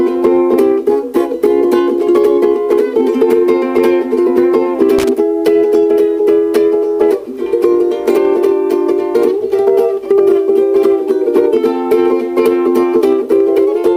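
Loose connector crackle at 4.99 to 5.09 s: a worn or dirty contact repeatedly makes and breaks, chopping the signal into a brief, irregular burst of scratchy crackle.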